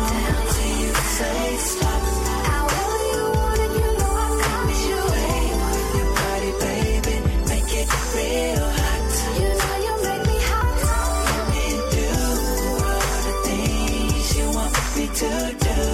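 At 10.61 s a few compressed frames are skipped, dropping around 70 ms of audio, so the sound jumps ahead; on a spectrogram it shows as a narrow vertical smudge where the texture abruptly shifts.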